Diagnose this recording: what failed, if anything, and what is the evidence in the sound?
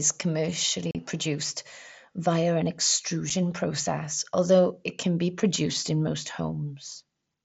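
Unconcealed Bluetooth headset packet loss on the wireless link between headset and phone, carried over the wideband mSBC codec. The speech drops out abruptly from 0.91 to 0.95 s, just before "produced via an", a gap fitting five lost frames, and again briefly at 3.30 s before "process although it can". Lost packets were replaced by silence or an idle pattern with no concealment.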